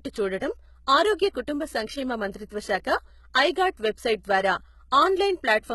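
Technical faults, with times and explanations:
throughout: mains hum. A ground loop or nearby transformer has coupled the 60 Hz power line into the recording path, so a steady low tone sits under the speech at about 30 dB below it.
throughout: HE-AAC compression. The treble is heavily damaged and stops at 11.8 kHz. The likely cause is HE-AAC at a low rate that fits about 16 kbps, rebuilding upper bands from copied lower ones, so sibilants turn gritty, metallic or lispy.
2.49 s: pre-echo. A sharp attack landed late in a codec block, and the quantisation noise sized for that loud onset spread across the quiet moment before it. The result is a short hiss of about 12 ms leading into a softened, smeared attack.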